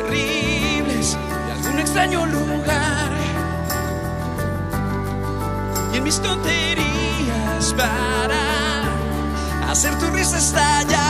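Nothing stood out as a technical fault on listening.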